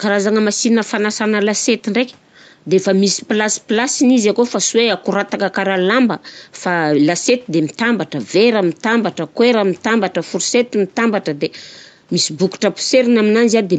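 No audible faults detected.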